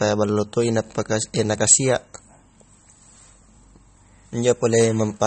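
Speech with plainly audible MP3 compression damage throughout: the top end stops abruptly at 8.4 kHz, and the remaining sound has the watery, swirling texture of spectral lines dropping in and out between frames. The likely cause is a starved MP3 encode, consistent with a low bitrate around 32 kbps. At 1.60 s there is a skip where audio is missing between chunks, with roughly 30 ms cut out and the two sides butted together. This is likely a chunk boundary in the recording or processing chain, and it fits a 2-second chunk size.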